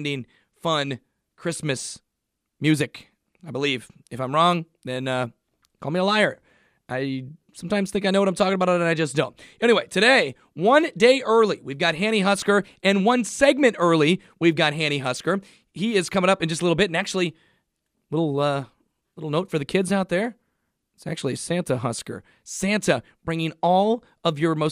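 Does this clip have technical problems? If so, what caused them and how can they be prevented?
No, nothing in this speech recording points to a technical problem, so no prevention is needed.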